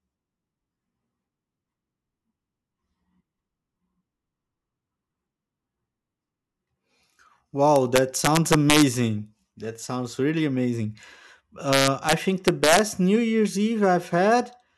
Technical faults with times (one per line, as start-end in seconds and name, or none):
7.76-8.83 integer overflow
11.73-12.13 integer overflow
12.48-12.79 integer overflow